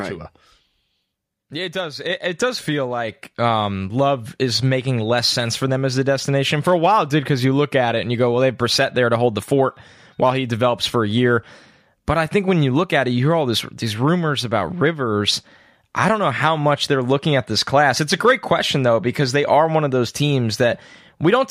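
At 2.1 s the microphone volume is stepped up about 4 dB at once. Voice and background jump together, unlike someone simply speaking louder.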